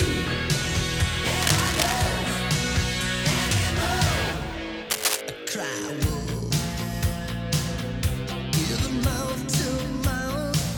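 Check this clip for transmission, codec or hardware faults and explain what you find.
Two bursts of cable scratch noise, from 1.42 to 2.02 s and from 4.90 to 5.21 s. The likely cause is a worn cable, connector or control being moved, so its contact resistance jumps about erratically and lets dense, ragged noise into the signal. Each burst sounds like scratching or rustling over the audio. The first sits a little below the sound's level, and the second, shorter burst is roughly as loud as the sound itself.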